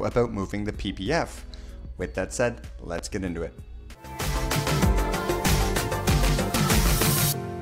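At 2.98 to 3.01 s a single loud pop cuts through, peaking roughly 10 dB above the surrounding audio. It is most likely a sudden voltage step or pulse, from a plug, switch, static discharge or driver glitch, added onto the signal and then rounded off by the downstream circuitry into a brief thump. Unlike a dropout or buffer click, nothing is removed. The sound continues intact underneath, and the event is a single burst rather than a repeating tick.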